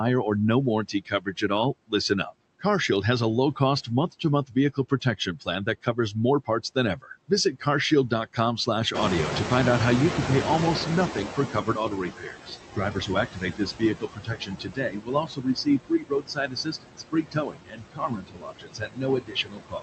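Noise suppressor artifacts run through the whole recording. The suppressor pulls steady background down by about 20 dB, estimating the noise and attenuating each band frame by frame. The residue is not even. The floor drops in the gaps and comes back up under the talker. The call path's Opus codec caps the top end near 8 kHz.

Speech cut by the noise suppressor first appears from 0.88 to 1.5 s, just after "or no". Parts of the speech are misread as noise and pulled down by up to about 14 dB, roughly a third of a second in total, so they sound swallowed. It recurs from 3.56 to 7.66 s after "has a", with dips of up to about 17 dB adding up to under a second. A briefer dip of about 11 dB falls between 8.09 and 8.93 s.

Noise suppressor catching up follows from 8.94 to 12.16 s. The room noise jumps by about 16 dB near 9.0 s and settles about 7 dB below the speech. The suppressor's estimate lags, so the louder background first leaks through with less reduction and only sinks over about 3.22 s as the estimate adapts, ending with a 16 dB cut.

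From 11.14 s to the end, speech cut by the noise suppressor returns more heavily. In the louder noise, quiet speech detail is attenuated by up to about 22 dB, leaving parts of the speech sounding swallowed or faint.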